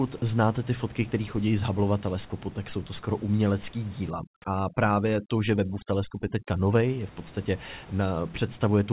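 Sound dropped by the voice detector at 0.18 to 0.22 s, just before "znáte ty fotky které", in this recording of Czech speech: the signal briefly gives way to flat comfort noise for about 40 ms, swallowing roughly 20 ms of real sound, likely because the sender's voice detector mistook that sound for background and stopped transmitting. Overdone noise removal runs from 4.10 to 6.84 s, between "jsou to skoro umělecký" and "je v podstatě": the steady room noise, normally sitting about 23 dB below the speech, drops and breaks up into twinkling specks, while quieter parts of the voice are cut along with the noise. Throughout, nothing is heard above 4 kHz, which fits a narrowband telephone codec such as G.711.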